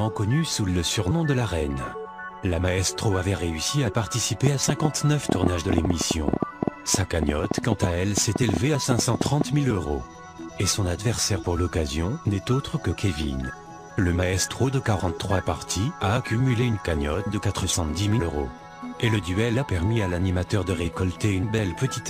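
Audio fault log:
4.47 to 9.42 s, train of clicks: a run of around forty sharp, near-identical pulses at about 7.9 per second but at an uneven spacing, so it sounds like a stuttering tick or pop riding over the sound and heard in its quieter moments too. The peaks stand roughly 15 dB above the surrounding material. Short bursts repeating with the same shape point to an outside injection, likely interference from nearby equipment or a faulty connection or power supply.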